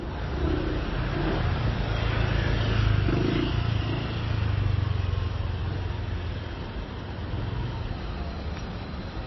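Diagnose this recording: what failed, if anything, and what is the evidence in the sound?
The codec stage is the likely culprit: the whole clip carries plainly audible MP3 compression damage. Throughout, the sound has a watery, swirling texture and smeared attacks, and nothing exists above 5.8 kHz, a cut-off pointing to a very low bitrate in the region of 23 kbps. Starved of bits, the encoder discards the treble outright and zeroes weak frequency lines that flicker between frames. A spectrogram shows a flat ceiling at 5.8 kHz with speckled, blotchy gaps below it.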